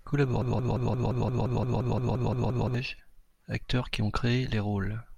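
A speech recording with a broken-record loop from 0.42 to 2.74 s: a 174 ms fragment repeats identically 13 times back to back, likely from a stalled player or stream resending its last buffer. Unlike echo or stutter, the copies never decay or vary, and the audio that belonged there is lost.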